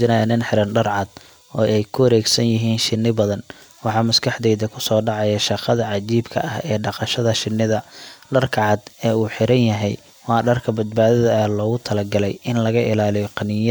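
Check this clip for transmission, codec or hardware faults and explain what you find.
No faults turn up anywhere in this clip.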